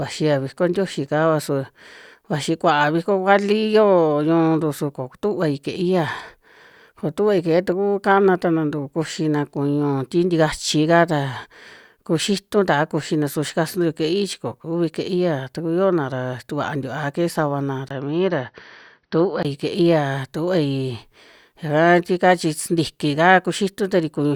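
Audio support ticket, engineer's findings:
17.89–19.45 s: speech dulls, nothing above 6 kHz, 20 ms gap, new faint noise. Likely input switched to a poorer device; gap and noise rule out plain filtering.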